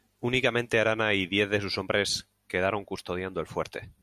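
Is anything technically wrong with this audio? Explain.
No, nothing is technically wrong with this speech clip. There is no fault here to point to.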